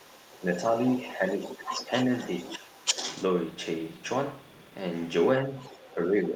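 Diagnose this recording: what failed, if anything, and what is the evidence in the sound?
A second voice leaks through from 0.0 to 3.26 s, about 10 dB below the talker. It returns from 5.61 s to the end at about equal level. This points to call processing. The echo canceller likely left loudspeaker pickup of the other side in the microphone signal.

Speech suppressed in double talk appears at 2.57 to 2.81 s, with the talker dipping by about 10 dB. It recurs from 5.46 s to the end, with a dip of about 5 dB. Both sides overlap there. The echo canceller likely attenuated everything it could not separate.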